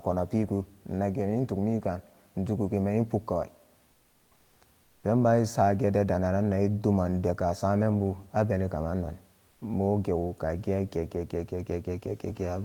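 At 3.91–4.61 s, 4.83–5.03 s and 9.51–9.61 s, comfort noise replaces the background. The real room noise gives way to steady, featureless hiss about 2 dB quieter, likely from Opus DTX. The gap is filled, not silenced as a gate would leave it.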